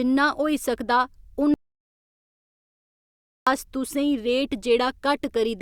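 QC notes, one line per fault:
1.54–3.47 s, audio dropout to silence: the speech cuts off abruptly after "जिन्ना होई सकदा" and returns mid-flow at "अस तुसें". The gap lasts 1.93 s and is silent, with no room tone or noise floor underneath. That points to the input signal vanishing while recording continued and silence was written in its place, likely from a lost connection or a momentary mute. Whatever was spoken in that stretch is gone.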